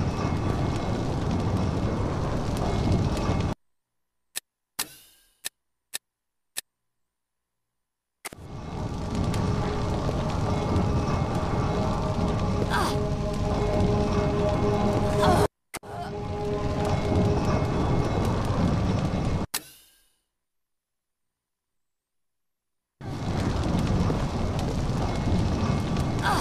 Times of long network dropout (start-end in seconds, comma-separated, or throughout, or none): none